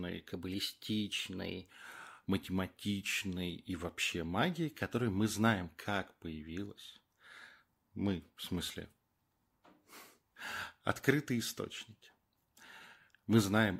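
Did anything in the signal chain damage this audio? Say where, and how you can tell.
Yes. From 0.32 to 1.70 s, just before "математичной и вообще магии", the speech runs 1.09 times fast and sits 1.47 semitones high. This is a wrong sample rate at playback, consistent with 44.1 kHz material clocked out at 48 kHz without resampling, so speed and pitch rise together.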